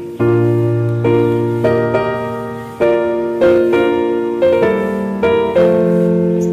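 Hard clipping occurs six times, at 1.05–1.27 s, 1.65–1.96 s, 2.82–2.95 s, 3.42–4.03 s, 4.43–4.71 s and 5.23–6.03 s, overdriven by about 3 to 5 dB. Peaks exceed what a stage can pass and are cut flat, adding high harmonics heard as crackle on peaks.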